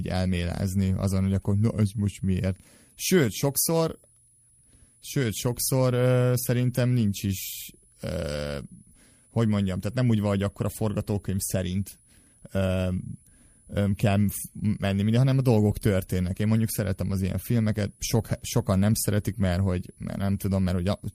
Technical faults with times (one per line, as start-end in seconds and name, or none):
0.00-21.15 switching supply whistle